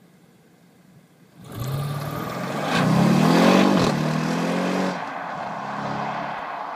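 From 3.62 s onward, crude rate conversion adds a faint inharmonic fizz about 45 dB down, unlike clipping's harmonic grit, which fits unfiltered linear 48-to-44.1 kHz resampling.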